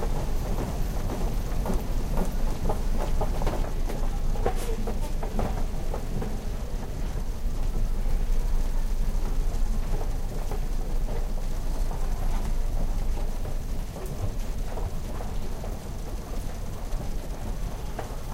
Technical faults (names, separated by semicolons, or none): doubled audio track